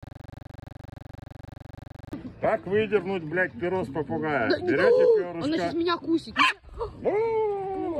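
From the start of the clip until 2.13 s, a system hang loop repeats a 42.67 ms slice exactly, a 23.4 Hz rattle that fits a 2048-sample buffer. Unlike a varying stutter, each repeat is identical.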